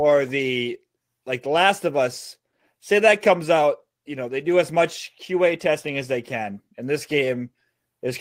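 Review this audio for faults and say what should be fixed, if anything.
Nothing here needs fixing; no faults are audible.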